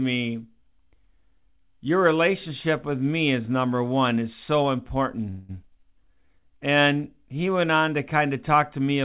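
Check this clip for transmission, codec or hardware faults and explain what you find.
Three network-related faults fall within a second of each other in this speech clip, heard through a narrowband call codec whose bandwidth stops at 4 kHz, consistent with G.711 mu-law at 64 kbps.

From 5.30 to 5.51 s there is a call audio freeze, most likely from packets held up in transit until the jitter buffer ran dry. For 190 ms the receiver stretches the last sound into a fading buzz or hiss, then resumes without loss. On a spectrogram this appears as a smeared, decaying band. The waveform shows a tapering repetitive tail.

At 5.63 to 5.65 s playback makes a skip ahead. Roughly 70 ms of audio is dropped, likely as the buffer sheds the delay built up just before, and the two sides are spliced almost directly. It sounds like an abrupt jump. A spectrogram shows a hard vertical seam where the formant tracks jump.

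From 6.04 to 6.59 s a jitter buffer slow-down adds 74 ms by repeating single pitch periods. The speech runs at about 88% speed with unchanged pitch, sounding drawn out. A spectrogram shows horizontally stretched, stair-stepped harmonics. The waveform shows cloned, identical cycles.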